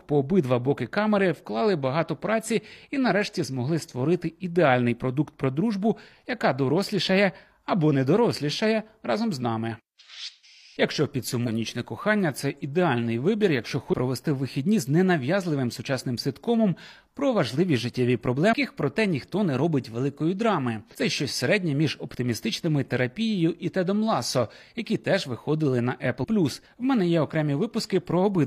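Brief glitches of about 50 ms cut into the speech at 11.43, 13.89 (just after "це ідеальний вибір якщо"), 18.49, 20.90 and 26.20 s. These come from damaged data in a compressed stream: the decoder misreads corrupted frames, loses sync, and resumes at the next valid frame header.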